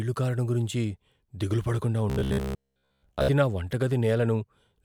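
After "కారడం గురించి దిగులు పడకుండా", from 2.1 to 3.28 s, robotic sound from repeated short buffers takes over. A roughly 15 ms chunk, likely replayed while real audio was skipped, imposes a rigid 66.8 Hz metallic buzz across most of the stretch. It shows as evenly spaced harmonic lines and identical repeating waveform blocks.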